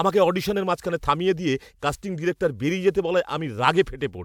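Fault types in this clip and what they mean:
Nothing stood out on listening to this speech recording.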